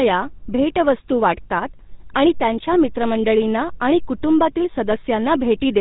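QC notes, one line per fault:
Throughout, GSM full-rate codec: buzzy, gravelly speech with nothing above 4 kHz, the sound of pulse-driven vocal-tract coding, which fits a 13 kbps GSM full-rate encoder.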